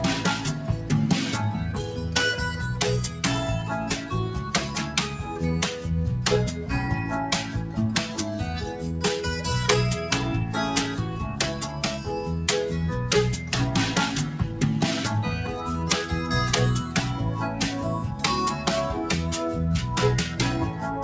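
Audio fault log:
0.55–0.89 s, sound cut by the noise suppressor: the suppressor misjudged part of this stretch as background noise and applied extra gain reduction to it, pulling the level down by about 4 dB at its deepest across roughly a fifth of a second in total. Steadier or decaying portions lose body and fade early, while sharp onsets survive, so the passage briefly sounds thinned and clipped at its tail, on top of the call path's band limit at 8 kHz.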